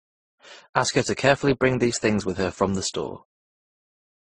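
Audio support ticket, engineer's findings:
Speech band stops dead at about 9.7 kHz, whole clip. Swirly, smeared consonants plus a watery, warbly texture stacked on top. Likely transcoding between lossy codecs: an MP3 through Opus and back to MP3, each pass re-encoding the last one's artefacts at low bitrates.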